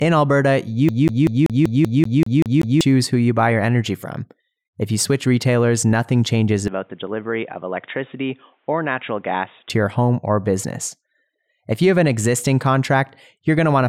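From 0.89 to 2.81 s, just before "who you buy your", a 0.19 s fragment repeats ten times in a fast, even stutter: a CD stuck on one turn, its laser jumping back a track.

After "switch retailers nothing changes", from 6.68 to 9.70 s, the voice abruptly turns dull and slightly quieter with faint new background noise, nothing above 3.8 kHz, until "your home or business". This is likely the input switched to a poorer device.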